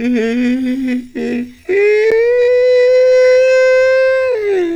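From 0.99 s to the end, the music abruptly drops to roughly half pace (0.505 times the original speed) while its pitch stays unchanged. This is a time-stretched section, likely made by software lengthening the passage to fit a target duration by repeating short pieces of the waveform rather than resampling it. The slowed material drags.

At 2.10 s, within that slowed stretch, a CD skip occurs. The laser has jumped to a different turn of the disc's spiral, so the player mutes for about 10 ms and then resumes from another point in the recording. It is heard as a brief tick or short gap followed by a sudden discontinuity in the music, the kind of jump that corresponds to one or more disc revolutions.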